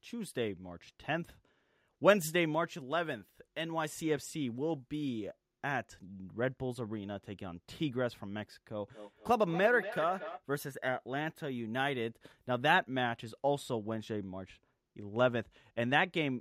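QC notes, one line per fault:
8.89–10.43 s, feedback echo between two devices: speech returns roughly every fifth of a second, up to about 9 dB below the voice, as a second device in the room replays the call into the microphone and the echo canceller cannot remove it. Repeats show as evenly spaced, fading copies on the waveform and spectrogram.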